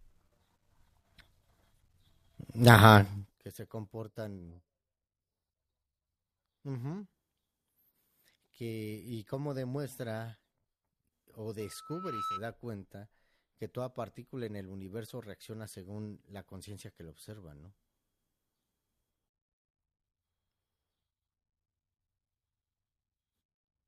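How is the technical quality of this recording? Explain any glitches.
The speech has two distinct glitches: a stepped level drop and a brief feedback howl.

Zipper noise, 3.07 to 3.51 s: the level falls roughly 20 dB in unsmoothed 1 dB steps, about fifty per second, so each step ticks audibly.

Loudspeaker feedback squeal, 11.60 to 12.44 s: the microphone re-amplifies its own loudspeaker, so a 1.3 kHz tone swells over roughly 0.7 s to about 5 dB above the speech.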